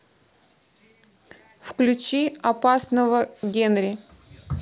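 No technical faults are audible.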